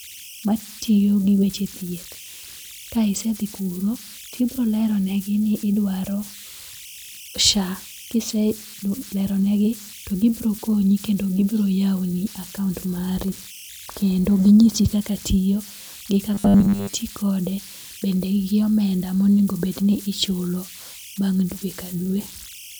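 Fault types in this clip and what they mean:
Converter idle tones: an undithered delta-sigma converter settling into repeating bit patterns, leaving a whistle near 3 kHz throughout, about 20 dB below the speech.
Robotic sound from repeated short buffers: after "tiyo gi", 16.34 to 16.94 s becomes a rigid 100 Hz buzz, likely one 10 ms buffer replayed while most audio is skipped.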